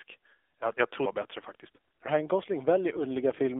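This speech clip went through the AMR narrowband mobile codec. It is confined to about 300 Hz to 3.5 kHz and sounds plainly buzzy and synthetic, which fits a 7.4 kbps mode. From 2.92 to 3.05 s, AMR bit errors make the voice hoarse and gargly while pitch and level hold. That fits about six corrupted 20 ms frames with a few percent of bits flipped.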